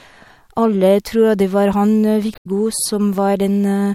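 At 2.32 s the speech breaks into a short glitch lasting until 2.47 s. This is damaged data in a compressed stream. Corrupted bytes made the decoder misread frames and lose sync. It recovered at the next valid frame header.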